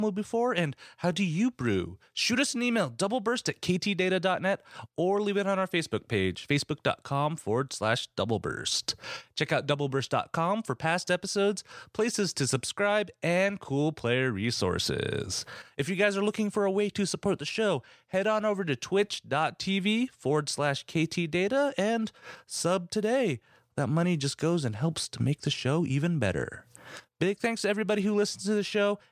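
A speech recording with nothing technically wrong to report.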